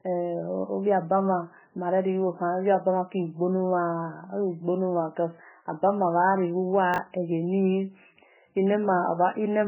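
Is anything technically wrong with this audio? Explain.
Yes, the speech carries two faults.

MP3 compression, throughout: nothing is heard above 3 kHz, and the sound is watery and swirly with smeared consonant attacks. This is likely heavy MP3 encoding at a very low bitrate, where the encoder cuts the treble and drops weak frequency lines that flicker between frames.

Chunks out of order, from 6.94 to 6.98 s: a 20 ms chunk plays one chunk late, after the audio that should follow it. Nothing is missing, but the three hard joins around the misplaced chunk make a brief jumbled stutter.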